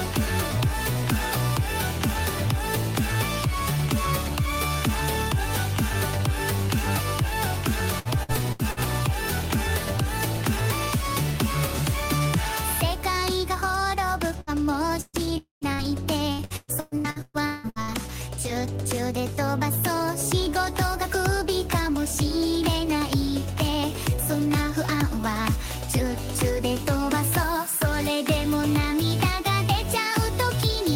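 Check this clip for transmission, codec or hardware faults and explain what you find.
The clip shows network packet loss in several forms, clustered between about 8 and 18 s.

Repeated packet loss (robotic sound) occurs at 7.99–8.80 s, with four gaps, the longest 67 ms, and about 29% of that span concealed. It returns more heavily at 16.32–18.03 s, with ten gaps up to 176 ms and over half the span concealed. Each hole is patched by extending the previous sound, so the audio turns choppy.

Bursts of packet loss occur at 14.41–14.50 s (60 ms lost), 15.01–15.16 s (120 ms lost) and 15.73–15.81 s (60 ms lost). Consecutive packets failed to arrive in time. The receiver stretched the last sound into a held buzz or hiss that fades, reaching silence for about 30 ms in the middle burst, before the audio jumps ahead.

At 15.37–15.64 s, about 240 ms of audio is missing. It is filled first by a fading continuation of the preceding sound and then by roughly 140 ms of silence, after which the audio resumes further along. 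The likely cause is a long network dropout, where nothing was received for that stretch.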